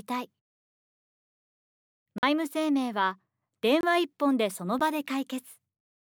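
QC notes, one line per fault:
2.18–2.23 s, block of digital silence: the audio drops to silence for about 46 ms with no fade, fitting a missed 2048-sample buffer, so a short hole is left.
3.81–3.83 s, block of digital silence: a 23 ms run of silence, fitting a 1024-sample buffer left unfilled, cuts in and out abruptly.
4.79 s, block of digital silence: a 12 ms stretch of silence, too brief to register as a gap, whose hard edges combine into a single tick.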